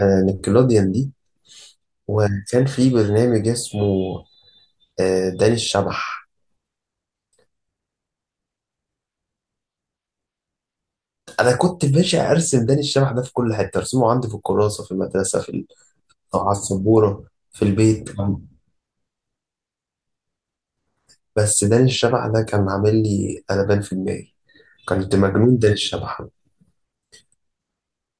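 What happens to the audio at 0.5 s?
Nothing goes wrong at 0.5 s; the audio plays through that moment intact, with no dropout, click or distortion.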